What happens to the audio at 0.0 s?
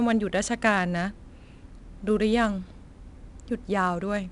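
From 0.0 s the speech carries 4-bit ADPCM compression, present for the whole clip. Each sample is coded as a coarse 4-bit step from a prediction, so a gritty hiss rides on louder passages, sharp attacks smear, and nothing sounds above 10.6 kHz, consistent with about 89 kbps.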